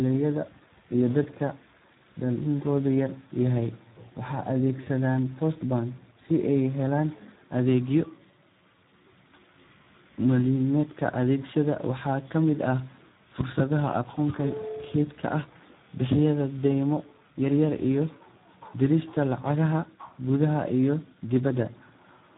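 From start to finish the speech carries heavy Speex codec damage, the CELP coder of older VoIP and game chat, at a setting that fits about 8 kbps. With so few bits for the excitation, voices turn hoarse and noisy, and nothing survives above 3.8 kHz. A plain low-pass filter would only dull the sound. Here the harshness comes from a starved excitation signal, which a band limit alone would never produce.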